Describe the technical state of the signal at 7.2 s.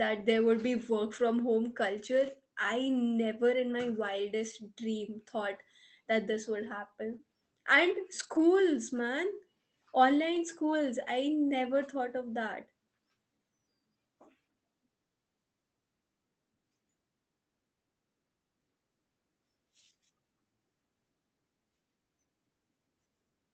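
Around 7.2 s the speech turns briefly rough and grainy, then smears for a moment. From 7.09 to 7.15 s there is a lost packet rebuilt from error correction. About 40 ms of audio, which points to two separate packets, never arrived. The decoder instead played the low-bitrate backup copies carried inside the following packets. So nothing drops out, but those frames sound coarser and noisier than the surrounding 24 kbps Opus audio.

Just after that, from 7.17 to 7.21 s, a short concealed packet loss sounds like a quick wobble or blur. About 20 ms was missing with no backup copy. The receiver covered roughly 15 ms of it by extending the preceding sound, following its pitch if voiced or as shaped noise if not, and then faded back into the real signal. Through both events the audio stays limited to an 8 kHz bandwidth, as on the rest of the call path.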